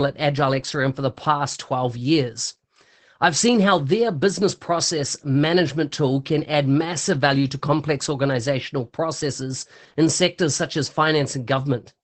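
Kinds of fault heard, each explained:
Opus voice compression: Throughout the speech, a linear-prediction voice coder has coarsely coded the excitation, leaving it plainly muffled, hoarse and faintly robotic, which fits roughly 12 kbps in wideband SILK mode. That buzzy, synthetic roughness, rather than swirly transform-codec warble or a simple dull low-pass, marks it out.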